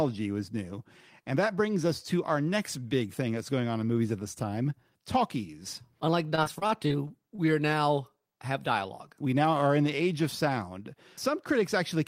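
Repeated packet loss hits this speech recording between 6.35 and 7.40 s: packets went missing or arrived too late in quick succession, and each hole was concealed by stretching the last received sound forward. Around eight short dropouts, the longest about 28 ms, cluster in that second, with roughly 100 ms of audio missing and about 148 ms patched over, some 14 percent of the span. The voice turns choppy, with fragments absent.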